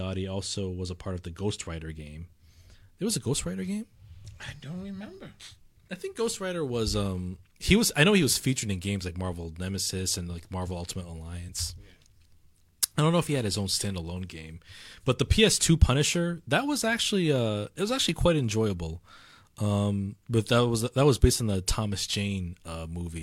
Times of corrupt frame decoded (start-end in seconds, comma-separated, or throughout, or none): none